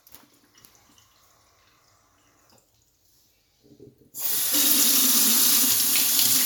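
No technical faults are audible.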